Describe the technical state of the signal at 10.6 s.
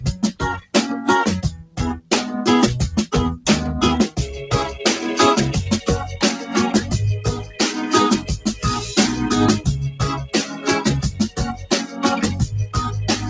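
A noise suppressor built for speech is running on this audio and treats steady, sustained material as noise, so levels swing by roughly 10 dB as held parts sink while onsets pass. The sound pumps and thins rather than holding steady.

At 10.6 s the sound is being cut by the noise suppressor, inside a stretch from 10.46 to 10.66 s. It judged that sound to be noise and pulled it down by about 7 dB at the deepest point, so it briefly dips. The call path shows no fault here. Its band stops at 8 kHz, which fits G.722 coding.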